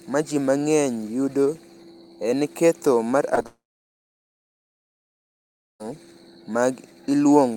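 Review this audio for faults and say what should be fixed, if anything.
Two brief smears in the speech, at 3.35 to 3.39 s and 3.43 to 3.46 s, are short concealed packet loss: about 20 ms of audio went missing each time, and the decoder bridged the gap by extending the preceding sound for 11 ms and 18 ms before blending back.

Right after, from 3.46 s to 5.82 s, the speech stops. A brief fading continuation gives way to roughly 2.2 s of silence, and the speech resumes with that stretch gone. This is a long network dropout, likely caused by the stream halting for over two seconds.

To prevent this, send the audio over a more stable connection with a larger jitter buffer and packet redundancy such as forward error correction, so isolated losses are recovered and long interruptions are caught before playback.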